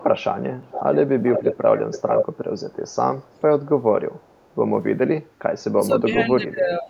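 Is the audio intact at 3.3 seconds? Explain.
No. An echo leak runs from 3.22 to 3.41 s: a very faint copy of the speech returns 458 ms late, likely from an incompletely cancelled loudspeaker echo.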